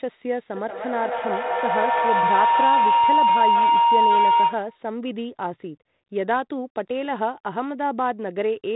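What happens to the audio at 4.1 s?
A shrill tone near 1 kHz is swelling, with repeats roughly every fifth of a second, peaking about 6 dB above the speech. This is feedback howl, running from 0.56 to 4.9 s: a microphone-to-loudspeaker loop re-amplifies its own output on each pass, so the repeats grow rather than fade.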